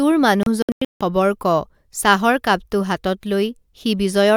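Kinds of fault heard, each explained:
Digital broadcast dropout: the receiver muted whenever incoming frames failed, so between 0.43 and 1.01 s the speech breaks into several short silent holes totalling about 0.35 s, the longest 160 ms, before resuming at "ক চাহৰ কাপটো হাতত". The waveform shows flat gaps and the spectrogram shows blank vertical bands.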